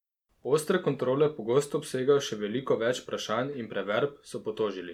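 A short stretch of speech with nothing technically wrong to point to anywhere in it.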